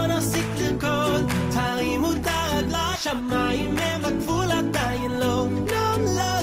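The audio has one skip ahead at 2.95 to 2.97 s. Playback jumps forward with no gap filled in, so around 0.4 s of audio is missing and the material on either side is joined directly. This happens when a stretch is dropped, either in transit or by the jitter buffer when it overflows, while later audio is already queued. Playback then runs roughly 0.4 s closer to real time than before the jump.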